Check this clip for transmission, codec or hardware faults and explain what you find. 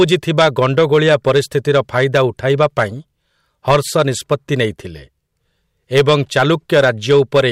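Hard clipping is present throughout the speech clip. The signal is driven about 9 dB beyond what a stage in the chain can pass, so the peaks are sliced flat. Only around two percent of samples hit the ceiling, but those flat tops generate high harmonics that were never in the source. Each louder syllable picks up a brittle crackle and a gritty edge.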